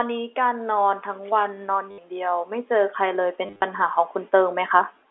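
Automatic gain rising runs from 0.34 to 4.82 s: the gain control judged the input too quiet and lifted it by about 10 dB. The speech and its background swell together gradually rather than jumping.

Packet loss with the last packet repeated occurs at 1.91–1.98 s, a 70 ms gap. Replaying the previous packet produces a brief robotic buzz, whose rate fits 10 ms packets. The second burst, 3.46–3.62 s, loses 120 ms scattered across 160 ms, with runs up to 30 ms. It stutters in fragments, all within the narrow telephone band of G.711 coding.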